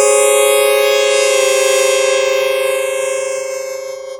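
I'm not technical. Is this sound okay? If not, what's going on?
No. From the start to the end of the clip, the two channels are drifting apart. The left and right sides were recorded on separate devices whose clocks run at slightly different speeds, roughly 70 parts per million. One side slowly falls behind the other, and by the end the gap is only about a fifth of a millisecond. When the two sides are combined, that sliding gap produces a slow, swirling, whooshing sweep known as flanging.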